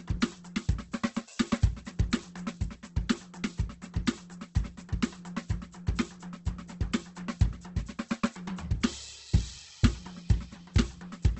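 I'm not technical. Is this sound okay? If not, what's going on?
No, not really. All the way through, this music has the rough, grainy, slightly hissy texture of heavy Opus compression, likely squeezed hard to save space. Everything above about 8.2 kHz is gone, so it sounds dull, and the tones smear into noise.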